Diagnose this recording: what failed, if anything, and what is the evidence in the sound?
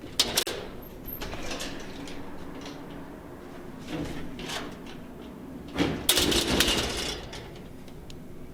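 A short hole opens in otherwise continuous sound from 0.43 to 0.47 s. For about 40 ms everything drops to silence with smeared edges, then the sound resumes exactly where it left off, with nothing lost or repeated. This is a gap at a join of encoded pieces, a codec-stage fault. The pieces were encoded separately and butted together untrimmed, so one piece's padded final frame and the next piece's encoder start-up delay both remain as dead air at the seam.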